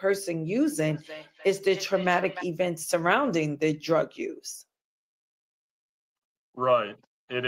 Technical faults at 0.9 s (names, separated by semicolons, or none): feedback echo between two devices